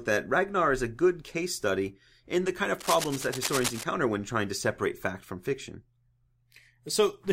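A worn cable or connector being moved, likely, makes its contact resistance jump about from 2.79 to 3.84 s. That cable scratch noise lays a dense, uneven scratching and rustling over the speech for about a second, only a little quieter than the speech itself.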